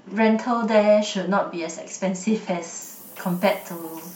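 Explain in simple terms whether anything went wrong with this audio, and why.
From 2.82 seconds to the end at 4.16 s, a steady, thin hiss sits under the speech. It gets sharper toward the very high end. This is low bit depth with noise shaping. The sound is stored with very few steps, which fits about 7 bits. That rounding creates noise. Noise shaping pushes it up into the highest pitches, but here the hiss is still fairly loud next to the speech.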